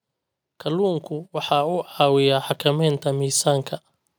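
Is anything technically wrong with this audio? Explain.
Yes. From 0.65 to 3.73 s, automatic gain rising: the gain control judged the input too quiet and raised level by about 9 dB, so speech and background swell together, seen as a steadily widening waveform envelope and brightening spectrogram.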